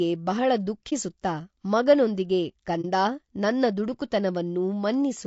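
Low-delay AAC compression runs throughout this speech recording: the roughness, graininess and noise between harmonics likely come from AAC-ELD's short frames at a low bitrate around 32 kbps. AAC frame loss with muting occurs at 0.89–0.93 s and 2.81–2.85 s, each a brief dip about 30 ms long, consistent with a single zeroed frame faded by overlapping windows.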